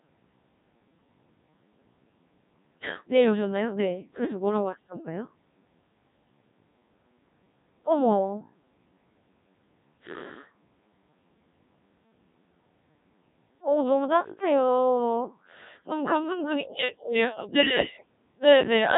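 From start to finish the speech runs through a Codec 2 vocoder, and the damage is heavy. The decoder doesn't keep the actual waveform. It rebuilds the voice from sine waves using only pitch, voicing, energy and a rough spectral outline, so everything comes out robotic and buzzy. The thin, smeared detail points to a very low mode, something like 1.3 kbit/s, and nothing survives above 3.8 kHz, which leaves it sounding boxed-in and dull.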